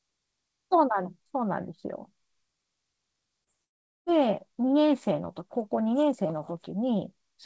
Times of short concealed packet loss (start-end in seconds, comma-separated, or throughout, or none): 3.44-3.50